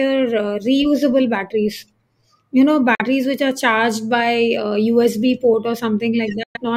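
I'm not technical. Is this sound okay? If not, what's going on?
No. The speech briefly cuts to silence at 2.95–3.02 s and 6.43–6.57 s, then carries on, skipping ahead. This is likely a Bluetooth dropout, with audio failing to reach the headphones in time.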